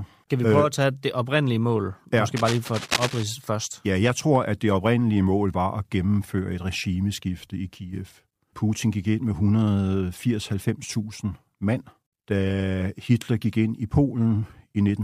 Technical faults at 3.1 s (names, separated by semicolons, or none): cable scratch noise